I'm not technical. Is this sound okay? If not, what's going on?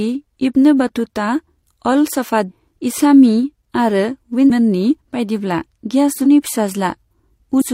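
No, there's damaged data in a compressed stream: bits of the file got garbled, so the player briefly loses its place. You hear short blips in the speech at 4.46 to 4.50, 6.21 to 6.25, and 7.57 to 7.63 seconds.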